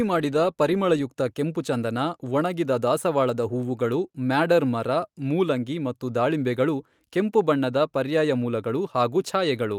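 No faults can be heard anywhere in this speech recording.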